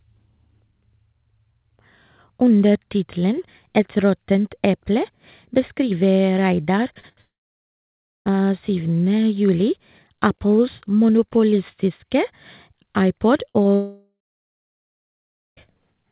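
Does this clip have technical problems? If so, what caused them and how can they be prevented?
Yes. There are several network faults.

From 6.94 to 7.19 s there is repeated packet loss, giving a robotic sound. Five short gaps arrive in quick succession, the longest about 33 ms. Each is patched by repeating the last sound, so about a third of this stretch is synthetic and choppy. A steadier network link and a deeper jitter buffer would prevent it.

Two long network dropouts follow. The first runs from 7.21 to 8.32 s and the second from 13.75 to 15.59 s. The filled sound fades to silence, lasting about 0.97 s and 1.42 s. About 1.06 s and 1.82 s of audio are simply gone. The likely cause is a connection stall. A more reliable connection, such as wired rather than congested wireless, would prevent it.

At 13.49 to 13.57 s a burst of packet loss removes 60 ms. The last sound is held and turned down, so it fades out before the audio resumes. 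Forward error correction or packet redundancy would cover gaps of this size.

At 13.63 to 13.67 s there is a short concealed packet loss of 20 ms. It is heard as a small smear where the receiver bridges the hole. The same redundancy would prevent it.

Throughout, the call path band-limits the sound to 4 kHz. This fits G.711 mu-law at 64 kbps.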